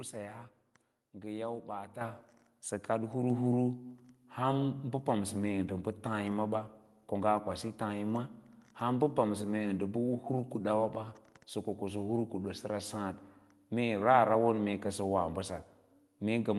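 At 2.01 s the microphone volume is stepped up: the calling software judged the input too quiet and raised the device's capture level in a single jump of about 8 dB. Voice and room background both leap louder at the same instant and stay there. That shared, instantaneous step is what sets it apart from a speaker simply talking louder, where only the voice changes, or from a gain control that ramps smoothly over time.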